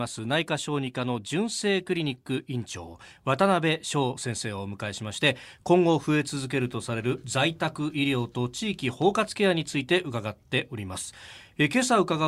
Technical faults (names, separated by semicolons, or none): none